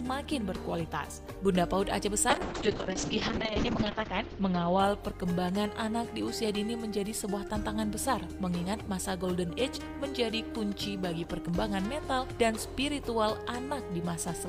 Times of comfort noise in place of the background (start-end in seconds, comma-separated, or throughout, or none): none